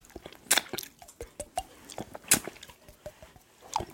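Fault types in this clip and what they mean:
Nothing here stands out as a technical problem; the audio comes across as steady and intact, with no dropouts, clicks or glitches to point to.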